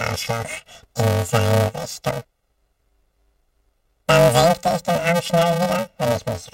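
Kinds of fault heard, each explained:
Planar audio read as interleaved: A robotic buzz at about 345 Hz runs through the whole sound, with no clear octave shift. Each 2.9 ms block, which fits a 128-sample block size, holds all its left samples and then all its right samples but is read as alternating pairs, so its left half and then its right half play at double speed, and that repeats at the block rate.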